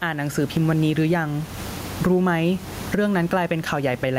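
Gain pumping runs the whole way through this speech, with the room noise about 31 dB below the voice and the gain swinging around 15 dB, likely from mic gain set too high with a fast limiter pulling it back.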